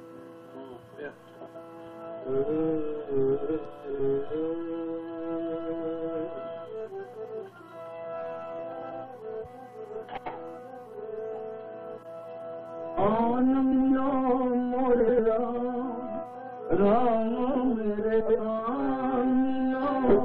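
Frames out of order occur seven times, at 1.37–1.56, 3.89–4.00, 8.73–8.92, 10.07–10.27, 13.72–13.92, 14.99–15.18 and 18.20–18.40 s. In each, two adjacent blocks were decoded in swapped order, so the sound flutters and garbles briefly. Most halves last 92.9 ms, fitting runs of four frames; the 3.89 s event uses 46.4 ms halves. A spectrogram shows abrupt vertical seams where the swapped blocks meet, and the waveform shows discontinuities there, with no gap or lost time.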